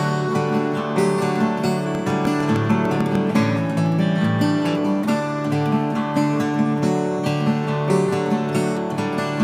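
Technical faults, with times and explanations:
1.95–3.16 s, train of clicks: likely interference or a faltering interface injects regular pulses, 6.6 per second, giving about ten ticks standing well above the sound.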